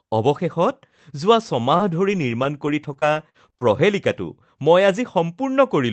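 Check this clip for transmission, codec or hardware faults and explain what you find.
One fault stands out, a burst of repeated packet loss (robotic sound) from 1.59 to 3.63 s. Packets kept dropping or arriving late across those two seconds. Each hole was patched by stretching the previous sound, and the next hole came soon after. The longest gap is about 48 ms. Roughly a third of a second ended up rebuilt. The speech turns choppy, with small pieces missing. It passes through a call codec whose audio stops near 8 kHz.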